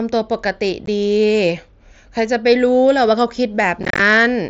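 At 0.86 s there is a brief hole in the speech, about 15 ms long. This is unconcealed Bluetooth headset packet loss. Voice packets between headset and phone went missing, and nothing filled the gap. The edges are abrupt and can click. The length fits two lost packets on the mSBC link. From 3.83 to 4.00 s the losses cluster. About 98 ms goes missing across 165 ms, with the longest run at 30 ms. The speech sounds chopped and crackly there.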